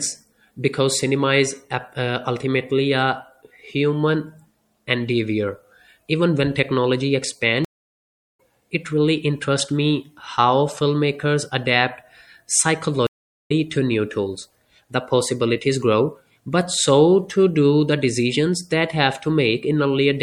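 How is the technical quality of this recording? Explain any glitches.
Technical quality is compromised throughout by codec damage and twice by gaps. Across the whole speech clip the sound is watery and swirly with dulled treble and smeared attacks. That is likely MP3 compression at a low bitrate, fitting about 64 kbps. Unlike a simple low-pass, the weak components flicker from frame to frame.

At 7.65 to 8.39 s, after "when technology", a stream reconnect leaves about 0.74 s of silence. The player then restarts its decoder mid-stream, and the audio resumes at "it really interests me", roughly 0.7 s further on. A second reconnect at 13.07 to 13.52 s gives about 0.43 s of silence before "to new tools", skipping ahead roughly 0.4 s. A plain dropout would keep the timeline intact; here material is lost.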